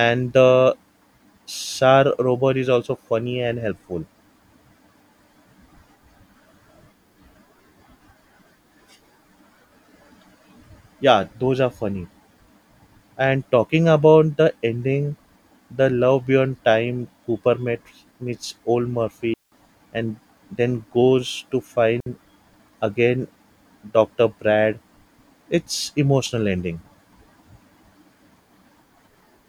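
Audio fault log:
19.34–19.52 s and 22.00–22.06 s, just after "goes to": digital wireless dropout. The receiver loses link data and mutes for 180 ms, then 60 ms, with a very short fade. This leaves clean near-silent gaps with no noise burst on either side.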